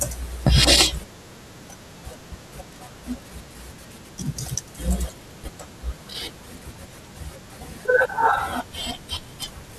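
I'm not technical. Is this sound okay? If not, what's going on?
No. This speech has two single sharp clicks, at 0.79 and 8.43 seconds. They are likely dropped samples: a handful of tiny audio points went missing, so the sound jumps abruptly. Unlike a dropout, no sound is missing or silenced. You only hear the click.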